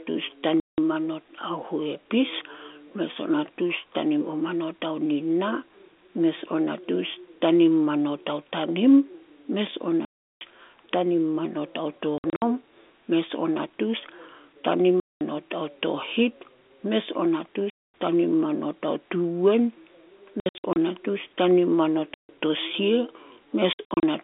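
Packet loss filled with silence cuts the speech at 0.6, 10.05, 12.18, 15.0, 17.7, 20.4, 22.14 and 23.73 s. Lost packets became dead gaps with hard edges. Gap lengths step in 30 ms units, which fits 30 ms packets. At 12.18, 20.4 and 23.73 s the holes come in short scattered bursts.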